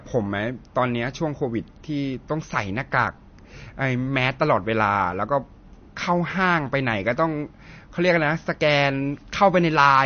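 Throughout the speech, nothing is left above 6.5 kHz and the sound is watery and swirling, likely MP3 compression at a rate fitting 32 kbps. The starved encoder drops weak frequency lines that flicker frame to frame. A plain low-pass filter would dull without that churning.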